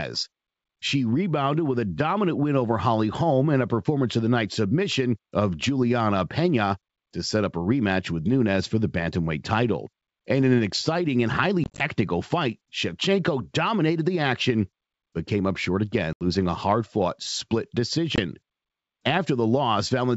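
Speech carried over G.722 wideband telephone coding, clear up to about 7 kHz, is broken three times by packet loss on an ADPCM call. From 11.64 to 11.82 s, about 90 ms of audio is missing, scattered as short gaps of up to 20 ms across 160 ms. From 16.13 to 16.23 s, about 80 ms drops out. At 18.16 s there is a brief 20 ms hole. Each gap is filled with hard-edged silence. The decoder's adaptive predictor and step size drift out of step with the sender's during the loss, so the sound comes back slightly distorted and settles within a few tens of milliseconds.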